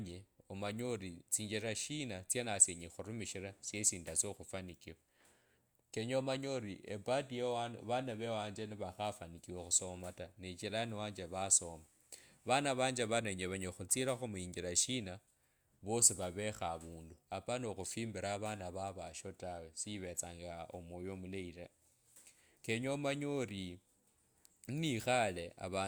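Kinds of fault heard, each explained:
No faults heard in it.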